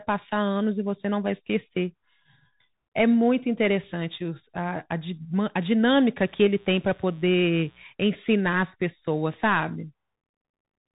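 A speech recording carried over a Bluetooth CVSD headset codec throughout, the narrowband link that encodes each sample as a single up-or-down bit with an adapting step size, which fits a 64 kbps CVSD connection. Because that scheme is narrowband and its step cannot follow rapid, loud high-frequency movement, the speech is plainly damaged: nothing above 3.8 kHz survives, so the voice sounds muffled and telephone-like, s sounds come out scratchy where the step size lags, and a granular hiss sits beneath the speech the whole way through. From 6.26 to 7.84 s, mains buzz enters the signal, the kind of interference that arrives when switching spikes from a dimmer, rectifier or poorly shielded line leak in twice per cycle of 60 Hz mains, spreading harmonics well up the spectrum. It is heard as a steady, raspy buzz lying roughly 35 dB below the speech, faint until it stops.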